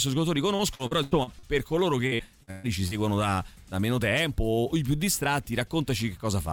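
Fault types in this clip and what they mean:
Repeated packet loss (robotic sound): dropouts keep getting patched by stretching the last sound, so 0.55–1.46 s and 2.07–2.94 s come out choppy and robotic.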